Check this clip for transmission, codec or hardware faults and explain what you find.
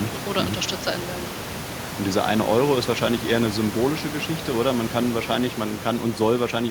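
Nothing amiss in the signal chain; the background about 12 dB under the speech belongs to the room, not the system.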